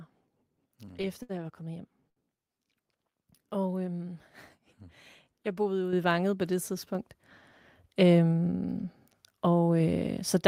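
Repeated stalls (stutter) run from 0.85 to 1.31 s. Packets kept arriving late, so the jitter buffer emptied four times, and the receiver held the last sound for 120 ms in total, the longest gap 69 ms. About a quarter of that stretch is filler, so the speech drags and stutters, though nothing is lost.

A short stall from a late packet follows at 2.09 s. One packet missed its slot and the buffer ran dry, so the preceding sound is stretched for 70 ms before playback resumes where it left off. A held moment results, and overall delay grows by 70 ms.

The microphone volume is stepped up at 5.93 s, by about 6 dB, and again at 6.95 s, by about 5 dB. Each time the call software judged the input too quiet and raised the device gain in one jump, so speech and background suddenly get louder together.

A jitter buffer speed-up spans 7.95 to 8.33 s. With more audio queued than its target, the receiver cut out many pitch-period-length slices, around 50 ms altogether, playing at 113% speed. 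Pitch stays the same, but the speech sounds hurried.

A third microphone volume step at 9.80 s adds about 2 dB more, a smaller but still abrupt rise in level.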